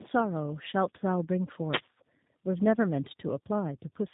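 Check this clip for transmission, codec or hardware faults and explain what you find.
Yes, there's one problem, and it runs the whole clip: tandem speech coding. The audio sounds like it went through two low-rate speech coders in a row, which fits an AMR-NB leg followed by G.729A, with a G.711 hop between. The second coder re-encodes the first one's already damaged output, so the errors stack. That makes the speech rougher, duller and more warbly than one codec would, with nothing above about 3.8 kHz.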